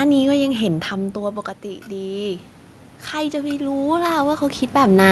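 From 1.12 to 2.52 s, automatic gain rising lifts voice and room noise by about 5 dB after a 12 dB input drop. From 3.11 to 5.03 s, it swells again by about 8 dB.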